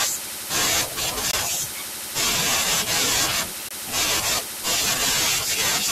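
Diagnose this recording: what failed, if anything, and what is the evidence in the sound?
The fault sits at the driver or buffer stage. The speech drops to a block of digital silence twice, from 1.31 to 1.33 s and from 3.69 to 3.71 s. Each hole lasts about 21 ms, cut in and out with no fade. The identical lengths fit a 1024-sample buffer at 48 kHz. A buffer was not filled in time, so the output carried zeros for one block.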